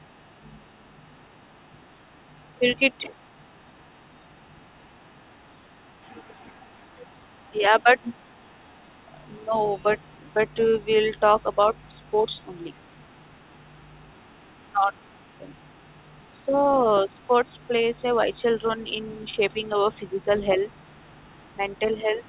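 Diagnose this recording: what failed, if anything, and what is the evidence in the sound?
Call processing: a faint second voice sits about 35 dB under the speech for the whole clip, likely the other side's voice leaking through from an echo canceller that left residue. It is a distinct talker, unlike a steady hum or noise.

Call processing: the speech dips by roughly 5 to 10 dB at 2.59, 7.52, 9.45, 14.71, 16.39 and 19.32 s, likely speech suppressed in double talk, with the canceller ducking both voices at once. The dips are brief level drops, not the silent gaps of packet loss.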